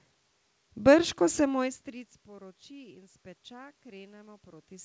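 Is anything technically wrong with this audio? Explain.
No, nothing's technically wrong here: the room noise and the couple of spots where the level shifts as the talker moves are just part of the recording, and the call path's cutoff at about 8 kHz is what that route normally does.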